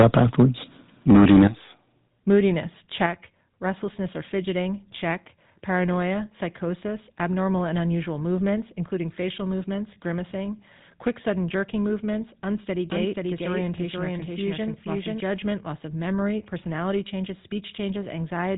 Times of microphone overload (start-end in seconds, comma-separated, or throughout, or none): 0.00-0.43, 1.09-1.47